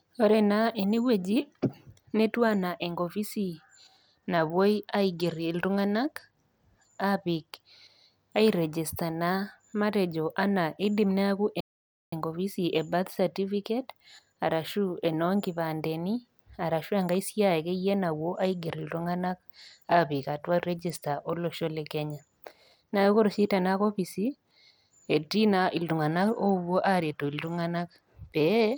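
At 3.96 s, after "anaa enkopisi", a Bluetooth SBC bit pool drop begins and lasts to 7.69 s. It returns from 18.11 to 21.47 s and from 25.98 s to the end. The treble dulls and gritty noise rises. The sound fits the bit pool falling from 31 to 14, near 99 kbps, on a congested link.

At 11.60 s, after "matejo anaa eidim neaku", a playback stall cuts the sound for 0.52 s. It resumes at 12.13 s with "enkopisi e birth certificate". The player likely ran out of data or was blocked.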